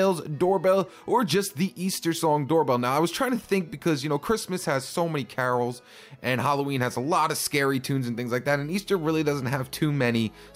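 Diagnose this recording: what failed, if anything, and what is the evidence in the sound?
Gain pumping runs through the whole recording: the gain drops by around 5 dB under each loud sound, leaving a squashed level. The likely cause is excessive input gain driving a fast limiter or compressor in the capture or call-processing stage.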